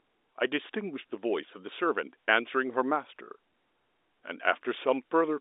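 No technical faults can be heard in the speech. It carries the sound of an ordinary G.711 telephone line, with the audio confined to roughly 300 Hz to 3.7 kHz and nothing above 3.8 kHz.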